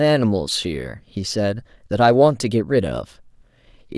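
No technical faults can be heard anywhere in the recording.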